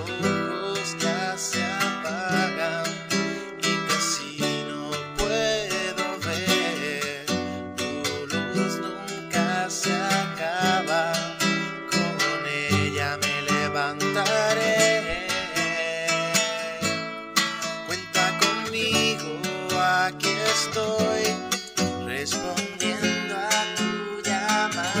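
From about 22.34 s through to the end, there's a wrong sample rate problem. The samples are being clocked out faster than they were captured, with no conversion, so everything speeds up by about 1.09 times and rises about 1.5 semitones together. That fits material recorded at 44.1 kHz being played back at 48 kHz. You'll hear the sound turn slightly brighter and hurried, with pitch and tempo shifting as one.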